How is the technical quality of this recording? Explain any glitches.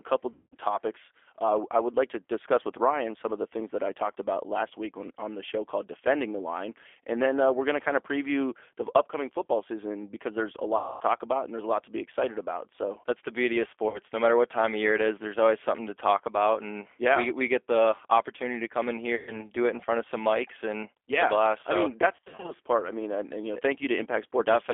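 The recording is narrowband and codec-limited throughout, with five short dropouts patched over by the decoder.

The G.729 codec colours the whole clip. Speech sits in a telephone band of roughly 300 Hz to 3.5 kHz, and the roughness is plainly audible: a slightly buzzy, synthetic edge. It comes from the decoder rebuilding each short frame from a vocal tract filter, a pitch estimate and a few pulses rather than the actual waveform. The sound points to the 8 kbit/s G.729A variant.

VoIP packet loss concealed by the speech codec occurs at 0.33–0.55 s, 10.77–11.03 s, 13.89–13.99 s, 19.15–19.45 s and 22.16–22.52 s. The missing audio amounts to 190, 240, 50, 120 and 230 ms, the last scattered across about 320 ms in runs of up to 60 ms. The decoder stretches its last pitch and filter with falling gain, so each gap smears into a fading buzzy tone or coloured noise. The sound stays weak briefly after packets resume.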